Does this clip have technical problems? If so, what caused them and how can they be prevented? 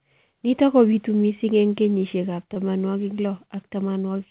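Yes. There is a short concealed packet loss from 2.54 to 2.58 s. About 20 ms of the call, which fits a single lost packet, never reached the decoder in time. The receiver bridged the gap by extending the preceding speech and then blended back into the real signal. The result is a brief smear or wobble in the speech, heard through a G.711 mu-law path with nothing above 4 kHz. Prevent it with a more stable network route, a larger jitter buffer, or redundancy and forward error correction on the call.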